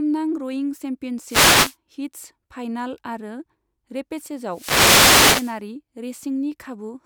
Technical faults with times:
1.25-1.76 wireless microphone noise hit
4.48-5.60 wireless microphone noise hit

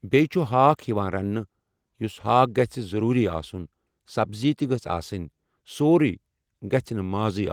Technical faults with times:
none

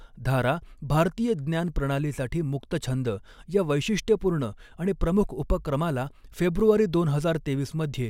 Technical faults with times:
none

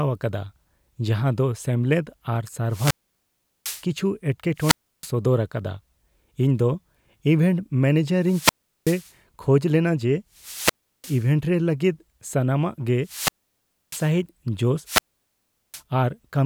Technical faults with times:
2.69-3.85 wireless microphone squelch dropout
4.56-5.11 wireless microphone squelch dropout
8.19-9.13 wireless microphone squelch dropout
10.34-11.30 wireless microphone squelch dropout
13.03-14.13 wireless microphone squelch dropout
14.84-15.82 wireless microphone squelch dropout

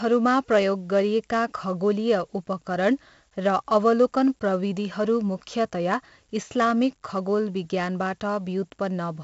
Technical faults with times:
0.00-9.23 4-bit ADPCM compression

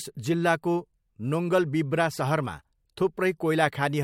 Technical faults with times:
none

